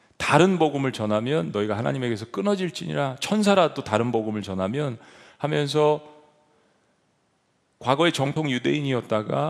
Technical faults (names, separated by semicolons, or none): dropped buffer (overrun)